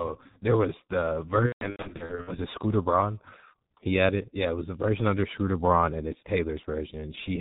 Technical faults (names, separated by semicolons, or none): G.723.1 codec; VoIP packet loss concealed by the speech codec